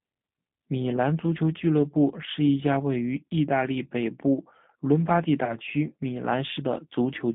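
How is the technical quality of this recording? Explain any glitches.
Quality is limited: the speech has been through a low-rate telephone codec for its full length, and there is one short dropout near the end.

G.729 codec, throughout. The rough, slightly synthetic texture fits G.729A at 8 kbit/s. Each 10 ms frame is rebuilt from a vocal-tract filter, a pitch predictor and a few pulses rather than the actual waveform. The line passes roughly 150 Hz to 3.7 kHz, so the audio sounds thin and boxy, with plainly audible codec damage.

VoIP packet loss concealed by the speech codec, 5.44 to 5.58 s, between "部伦巴第" and "区米". Packets went missing, which fits about three lost frames, or 30 ms. The decoder filled the gap by repeating its last pitch and filter settings at falling gain. The result is a brief buzzy or noisy, fading stretch. Because each rebuilt frame depends on the previous one, the speech stays weak or distorted for tens of milliseconds or more after packets return.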